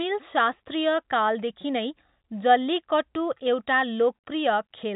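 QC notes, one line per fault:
Nothing stood out on listening to this speech, which carries the narrow telephone band of G.711 coding, with nothing heard above about 3.8 kHz.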